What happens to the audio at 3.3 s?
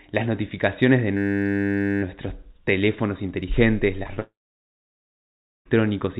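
Nothing goes wrong at 3.3 s: the speech there carries on intact, with only the narrow telephone bandwidth of the call path, nothing above 4 kHz, that runs through the whole recording.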